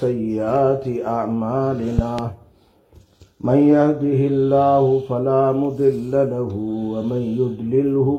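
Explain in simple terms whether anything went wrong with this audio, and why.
Around 1.99 to 2.21 s there's a loud pop, actually two sharp pops in quick succession, sitting well above the rest of the sound, which carries on underneath without a break. That's what you get when a sudden jolt of voltage gets into the signal chain, most likely from something like a plug being jiggled, a switch being flipped, a static discharge or a hiccup in the audio driver.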